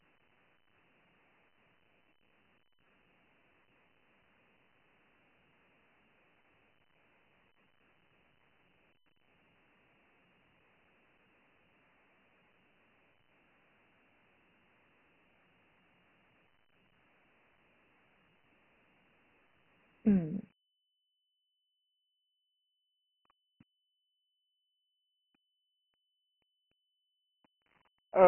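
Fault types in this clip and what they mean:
Dialogic VOX ADPCM: This is a 4-bit adaptive difference coding scheme used for phone-system recordings. The coder stores each step from a predicted value, with too few levels to follow the waveform closely. Here the damage is heavy. A rough, gritty hiss rides along with the speech throughout. Nothing is left above 3.8 kHz, so the sound is narrow and dull. The bitrate is about 24 kbps.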